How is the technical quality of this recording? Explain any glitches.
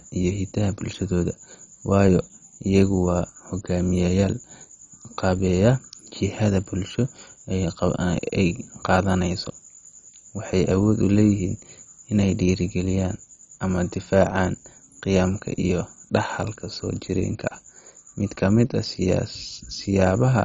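The recording is heavily degraded throughout. Across the whole speech clip it sounds dull and gurgling, with nothing above 10.4 kHz. This is likely MP2 compression at a very low bitrate, fitting about 32 kbps, where upper sub-bands drop out and coarse quantisation leaves granular distortion.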